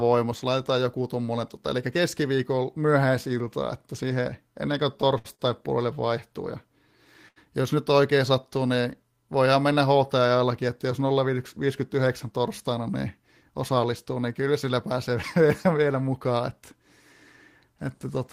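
Short stalls from a late packet occur at 5.18 to 5.27 s, 5.35 to 5.41 s and 7.28 to 7.38 s. Each time a packet arrived late, the jitter buffer emptied and the receiver held the last sound for 62, 43 and 79 ms. The speech then resumed where it stopped, with nothing lost, but each stall sounds like a brief drawn-out hold with a faint buzz or dip.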